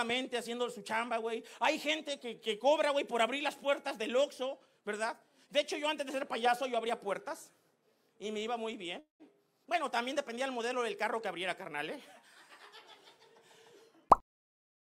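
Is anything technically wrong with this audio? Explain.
Yes. At 8.99 to 9.23 s there is a call audio freeze, likely from delayed packets emptying the jitter buffer. The last sound stretches into a fading buzz and then silence, and the audio then resumes intact, unlike a dropout, which loses material.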